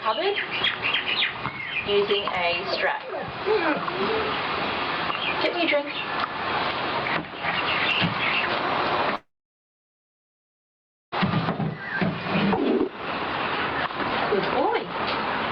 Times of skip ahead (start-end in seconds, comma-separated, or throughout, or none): 12.57-12.59